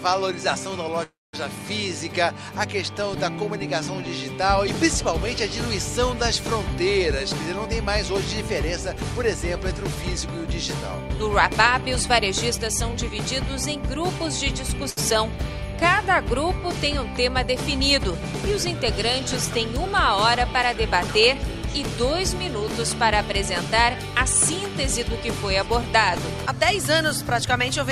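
From 1.03 to 1.35 s there is a call audio freeze. The last sound continues and fades, then falls silent for about 0.21 s. It then resumes where it stopped, with nothing lost. The likely cause is held-up packets emptying the jitter buffer.

From 7.66 to 13.10 s there is a jitter buffer speed-up. The buffer was over its target, so short pitch-period pieces were cut repeatedly. Playback runs at 104% speed with unchanged pitch, removing roughly 0.2 s.

At 14.90 s a short stall from a late packet occurs. The buffer ran empty, so the receiver stretched the last sound for 71 ms until the packet arrived. The audio then continues with nothing missing.

From 19.49 to 21.98 s a second jitter buffer speed-up runs at 105% speed, at the same pitch. It removes roughly 0.15 s and sounds hurried.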